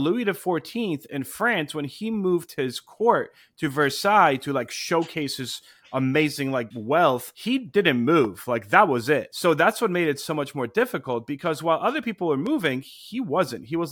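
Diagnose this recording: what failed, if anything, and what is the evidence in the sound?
Loud pops, likely a plug or switch transient in the analogue wiring: one sharp pop at 8.25 s after "like wealth he didn't", and a softer double pop from 12.47 to 12.68 s after "while other people were".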